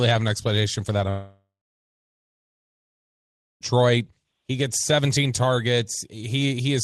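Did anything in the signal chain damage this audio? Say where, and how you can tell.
Yes, at the network stage. Right after "an explanation for that", from 1.09 to 3.63 s, the sound decays into a fading buzz, then about 2.1 s of silence before resuming with material missing. This is likely a long network dropout, with the jitter buffer concealing before giving up.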